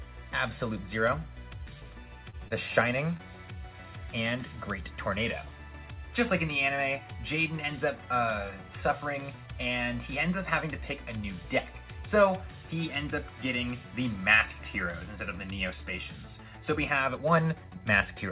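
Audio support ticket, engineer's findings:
Short concealed packet loss, 2.30–2.36 s and 2.48–2.53 s: about 30 ms of audio lost each time, decoder extrapolated the last sound then crossfaded back. Brief smear or wobble; a short sound may vanish.

Short stall from a late packet, 3.17–3.23 s: jitter buffer ran dry, receiver held the last sound about 25 ms until the packet arrived, adding 25 ms delay. Nothing lost; sound briefly drawn out.

Call path: nothing above 4 kHz, consistent with narrowband G.711 mu-law.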